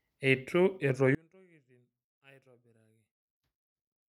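From 1.15 s to the end, the signal points to one channel inverted: the likely cause is one stereo channel having its polarity reversed, so that the two channels cancel when summed to mono. The speech, which sits equally in both channels, largely disappears, dropping by about 33 dB. What remains is only the small difference between the channels, heard as a faint trace of the speech.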